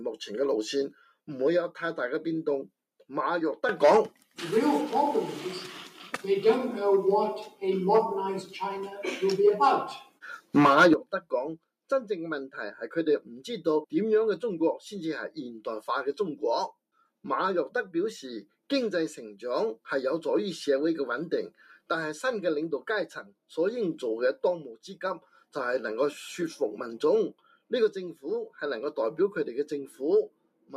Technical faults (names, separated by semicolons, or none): noise suppressor applied to music or sounds; sound cut by the noise suppressor